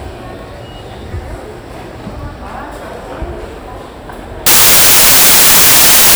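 At 4.46 s the sound gives way to loud, harsh broadband noise that lasts to the end of the clip at 6.16 s. These are samples built from the wrong bytes: each value is assembled with its bytes misordered or misaligned, so the rapidly changing low-order bits land in the high-order position. Unlike added hiss, which sits at a steady level beneath intact sound, this noise replaces the sound outright.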